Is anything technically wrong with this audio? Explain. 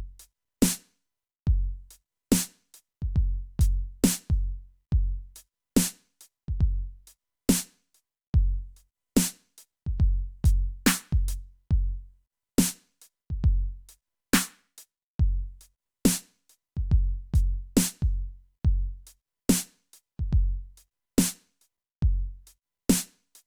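No, nothing technically wrong is audible in this music.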